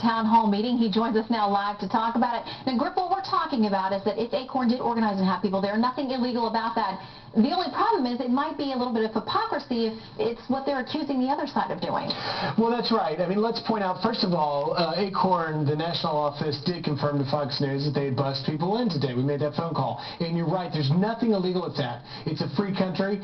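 No technical faults can be heard anywhere in the audio; the signal stays steady and intact throughout.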